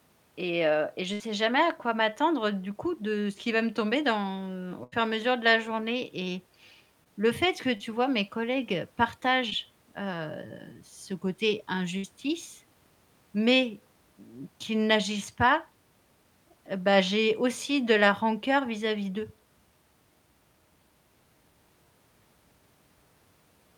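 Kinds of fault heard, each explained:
Burst of packet loss: Three times, at 1.13 s, 4.84 s and 11.97 s, a run of consecutive packets fails to arrive in time to be played. The receiver extends the last received sound for 61 to 81 ms, letting it decay into a held buzz or fading hiss. Playback then picks up later, with 60 ms of speech missing at the first and third events and 80 ms at the second.
Short concealed packet loss: At 7.04 s, 7.77 s and 9.50 s, about 20 ms of audio misses the decoder's deadline each time. The gap is patched by extrapolating the preceding sound, pitched if voiced and shaped noise otherwise, for 14 to 26 ms before crossfading back into real audio. Each event is heard as a brief smear or wobble, and a short consonant there can disappear.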